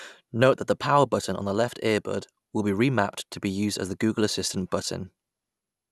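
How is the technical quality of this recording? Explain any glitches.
Nothing stood out as a technical problem on listening to this speech recording.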